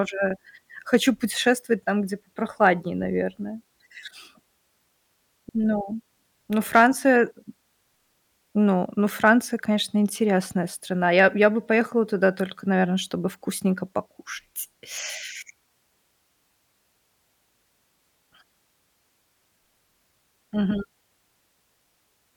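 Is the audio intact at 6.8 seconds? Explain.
No. A brief crackle on the peaks from 6.75 to 6.83 s is hard clipping: the speech overshoots the signal path's limit by about 2 dB, so its tops are sheared flat.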